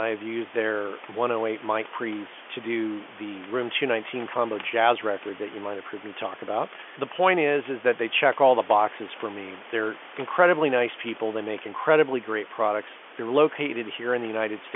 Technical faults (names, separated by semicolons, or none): none